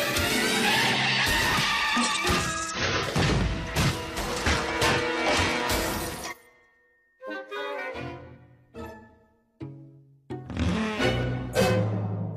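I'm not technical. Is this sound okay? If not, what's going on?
No. Compressed frames are skipped at 2.70, 3.86, 6.27, 8.32 and 11.52 seconds. Pieces of the file never play, so the sound jumps ahead, losing roughly a tenth to a third of a second each time.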